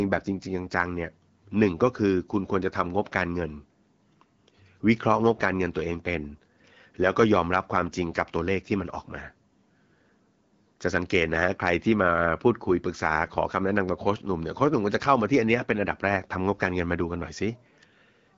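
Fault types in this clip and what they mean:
Nothing's amiss here: the speech comes through an AMR wideband (HD Voice) link at 12.65 kbit/s, so the top end stops at about 7.5 kHz, and that's simply how that kind of call sounds rather than anything going wrong.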